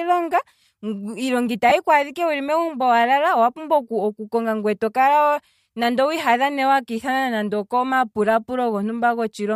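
At 1.69 s the speech has a brief dropout from lost LE Audio frames, lasting until 1.72 s. About 22.5 ms of audio failed to arrive, which fits three 7.5 ms frames on a Bluetooth link. The decoder filled the gap by repeating the last spectrum with scrambled phase, so the speech briefly turns into a hissy, toneless smear. On a spectrogram the harmonic lines break into a blurred vertical patch. In the waveform the periodic cycles give way to noise-like wiggles. The faint breathy grain across the clip is likely light LC3 compression.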